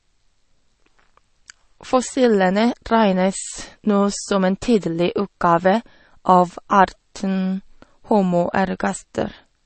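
Throughout, the speech is dull above 8.3 kHz and sounds watery. Plainly audible codec damage fits low-bitrate MP3 compression, likely around 32 kbps.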